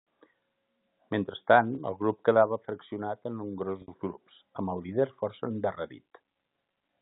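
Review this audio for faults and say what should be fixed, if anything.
Packet loss with pitch repetition at 1.75–1.78 s, 3.82–3.88 s and 6.71–6.73 s. Gaps of 30, 60 and 20 ms get patched by looping the last pitch period, giving buzzy held blips for the two shorter gaps, while the 60 ms gap fades into silence and speech returns with a short cross-fade. Prevent it with forward error correction or a deeper jitter buffer on the G.711 telephone link.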